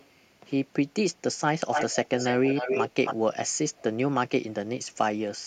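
At 0.0 to 0.09 s a faint delayed copy of the speech appears, about 373 ms late. From 1.72 to 3.15 s an echo leak returns strongly, 276 ms behind and nearly as loud. Another faint scrap follows at 3.78 to 3.82 s. A loudspeaker's echo canceller likely let it through.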